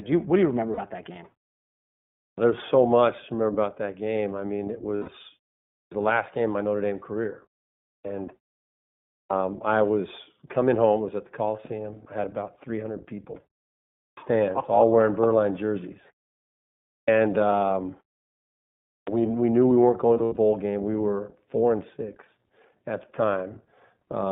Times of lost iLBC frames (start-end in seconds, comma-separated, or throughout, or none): 0.73-0.79, 4.96-5.10, 20.09-20.38